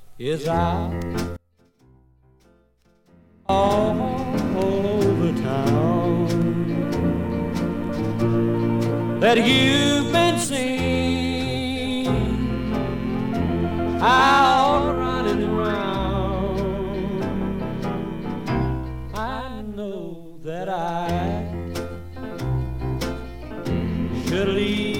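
From 1.37 to 3.49 s the sound falls about 31 dB to a faint residue, likely one channel inverted; the waveform and spectrogram go nearly blank there.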